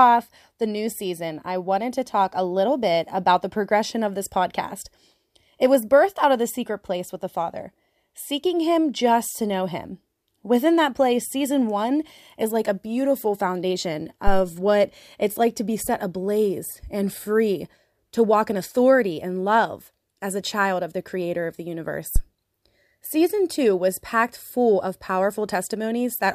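At 14.27 to 14.41 s and again at 22.16 to 22.21 s, a phantom power thump appears: a supply switched on or off a live input sends a step through the coupling capacitors. Each deep thump peaks near about -6 dBFS and dies within 31 ms and 12 ms, unlike a plosive's breathy, speech-tied burst.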